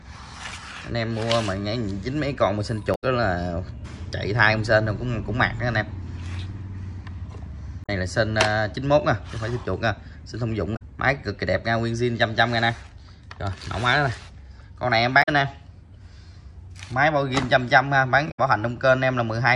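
Five short bursts of damaged data in a compressed stream occur at 2.91 to 3.03 s, 7.83 to 7.89 s, 10.73 to 10.82 s, 15.19 to 15.29 s and 18.27 to 18.39 s, each lasting roughly 70 to 120 ms. At these points the decoder receives corrupted frame data, misinterprets or drops it, and has to resynchronise on the next valid frame header. Each event is heard as a brief chirp, squawk, click or short hole that breaks the audio.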